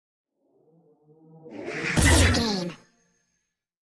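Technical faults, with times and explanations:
Throughout, wrong sample rate: everything runs 1.5 times too fast and about 7 semitones high, which fits 16 kHz audio played at 24 kHz without conversion. On a spectrogram every feature sits 1.5 times higher and is squeezed in time; the waveform's events crowd closer together.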